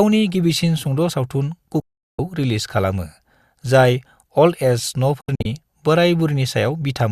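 Digital broadcast dropouts hit this speech clip at 1.80 to 2.19 s, a single 0.38 s mute, and at 5.21 to 5.46 s, several short holes scattered over 0.24 s, the longest 72 ms. Each time the receiver lost the signal or rejected corrupted frames and silenced output within about 3 ms, losing the programme until clean frames resumed.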